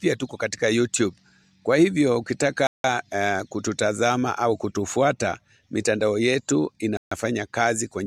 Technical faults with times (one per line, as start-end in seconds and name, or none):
2.67-2.84 Bluetooth stall
6.97-7.11 Bluetooth stall